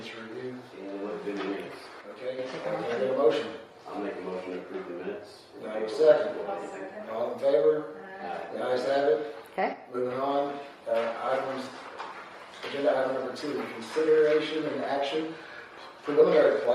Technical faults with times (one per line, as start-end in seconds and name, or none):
2.01-2.39 one channel drops out
9.73-9.95 one channel drops out